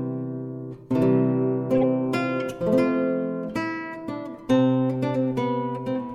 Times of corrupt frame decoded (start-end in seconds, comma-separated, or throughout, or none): 1.78-1.85